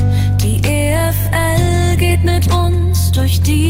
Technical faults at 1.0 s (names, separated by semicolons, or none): call bitrate drop